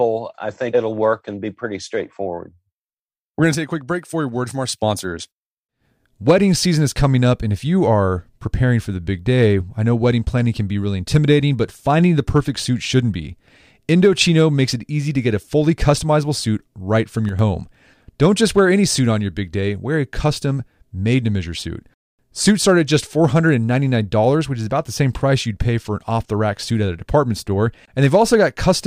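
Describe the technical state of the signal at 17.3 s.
From 17.29 to 17.39 s, just after "customizable suit right from", the speech drops abruptly by about 6 dB for a tenth of a second, likely because one channel drops out before the mono sum. Unlike a full dropout, it never goes silent.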